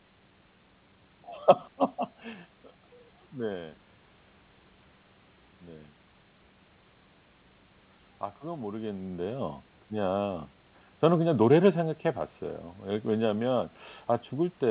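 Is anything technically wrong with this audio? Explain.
No, nothing is technically wrong with this audio.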